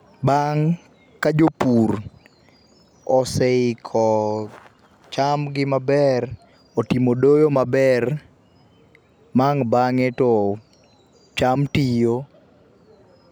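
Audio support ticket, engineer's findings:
Speech reviewed in full, no faults found, nothing to escalate.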